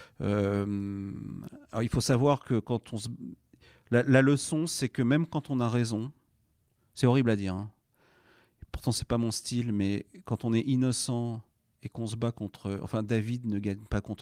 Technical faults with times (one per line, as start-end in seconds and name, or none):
none